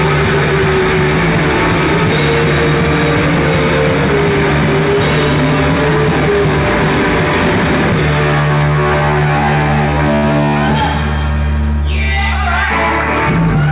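At 10.16 to 10.25 s there is a short stall from a late packet. The next packet missed its playout time, the jitter buffer ran dry, and the receiver stretched the last sound for about 68 ms until it arrived, then resumed from the same point. Nothing is lost, but the sound hangs briefly with a faint buzzy or dipped quality, and everything after runs 68 ms later. The band-limit at 4 kHz throughout points to G.711 mu-law at 64 kbps.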